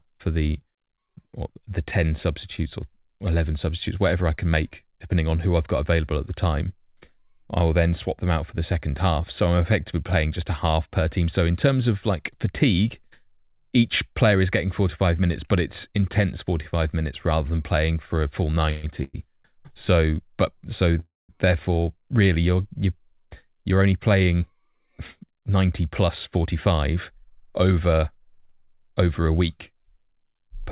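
Three call audio freezes interrupt the speech: 18.71 to 18.85 s, 19.03 to 19.16 s, and 21.00 to 21.31 s. Each is likely a stall in packet delivery that emptied the jitter buffer, so the receiver stretched the last sound into a fading buzz. The first is filled throughout, at about 118 ms, and the second runs about 104 ms with roughly 10 ms of silence. The third runs 293 ms and decays into roughly 190 ms of silence. On a spectrogram each shows as smeared, repeating bands that fade. The third ends in a blank column. No speech is lost, but each pause pushes the rest later.

From 23.05 to 26.46 s a jitter buffer speed-up follows. Having built up surplus delay, the receiver cut many pitch-period-sized slices, about 0.3 s in total. The speech plays at 108% speed with unchanged pitch and sounds hurried. The waveform shows syllables packed closer together, while spectrogram harmonics keep their spacing. 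Throughout, the band stops at 4 kHz, which fits a 64 kbps G.711 mu-law call path.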